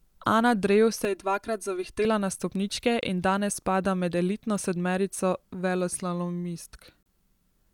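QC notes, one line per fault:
1.05 to 2.05 s, channel delay (comb filtering): for this one-second stretch the speech turns hollow and phasey. One channel trails the other by about 3 ms, and when the two are summed to mono the shared content cancels at evenly spaced frequencies, starting at roughly 150 Hz and repeating up the spectrum. Unlike a gap, nothing drops out. The sound stays continuous, and the notches hold still rather than sweeping, which sets this apart from a moving phaser effect.
3.01 s and 7.03 to 7.06 s, gap at a join of encoded pieces: the speech briefly breaks, with gaps of 19.9 ms and then 32 ms, 4 s apart. That regular spacing fits pieces encoded separately and joined untrimmed, each leaving its encoder start-up delay and final-frame padding in place. The edges are smeared by the codec, and the speech resumes exactly where it stopped. Nothing is lost from the content, which distinguishes these gaps from dropouts where sound is removed.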